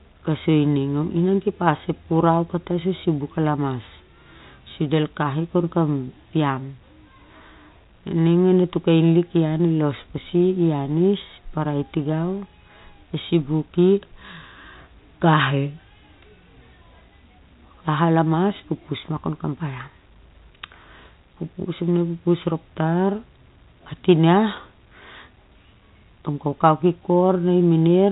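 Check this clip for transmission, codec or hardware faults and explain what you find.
Nothing here sounds amiss; the speech simply comes over an ordinary G.711 telephone link, so it tops out at 4 kHz and carries the faint hiss that format leaves riding along with the level.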